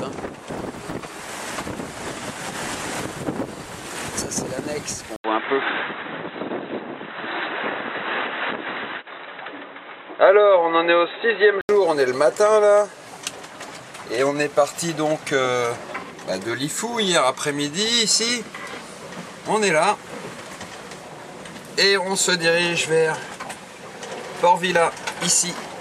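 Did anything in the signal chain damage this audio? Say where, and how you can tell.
Yes, at capture. After an 80 ms gap at 5.16 s, nothing passes above 3.9 kHz until 11.69 s. The input likely switched to a poorer device.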